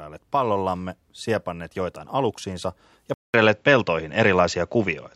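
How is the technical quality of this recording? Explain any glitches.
The recording has one clear glitch in the last two seconds. At 3.14 s, right after "siepanneet joitain aluksiinsa ja", the speech drops out for about 0.2 s and resumes duller to the end. This is an input switched to a poorer device, likely a change of microphone. The new path stops near 7.6 kHz, the level shifts by a few decibels, and a faint new noise floor appears. A simple filter change would not alter the level and noise together.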